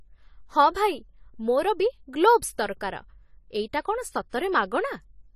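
From start to finish the speech carries plainly audible AAC compression damage, likely from AAC-LC at around 32 kbps. Nothing remains above 14.1 kHz, and sibilants sound smeared and fizzy. A plain low-pass filter would only dull the sound; here the remaining band also warbles.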